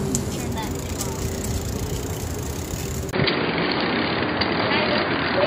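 At 3.11 s there's a 20 ms gap, then the sound goes dull and boxy, with nothing above 4.8 kHz, a level shift of around 5 dB and a faint new noise floor. It's likely the input switched to a poorer device. At 3.78 s a 10 ms smear, fitting one lost LE Audio frame, briefly turns the sound noisy as the decoder patches the gap.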